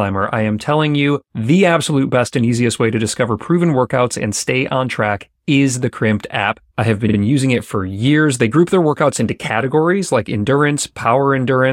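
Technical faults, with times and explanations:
7.08–7.17 s, repeated frames: between "app I have" and "using it for years" a 46.4 ms slice of speech plays two extra times, a stutter that adds about 93 ms. The block length fits a pair of compressed frames being sent again and decoded again. On a spectrogram the same short pattern of harmonics and formants appears side by side, and the waveform shows identical segments copied back to back.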